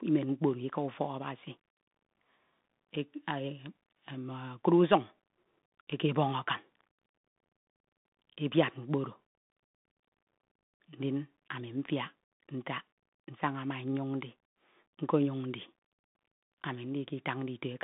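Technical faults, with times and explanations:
Throughout, Bluetooth CVSD headset codec: one-bit delta coding caps the band near 3.8 kHz, making s sounds scratchy, loud highs distorted, with granular hiss beneath.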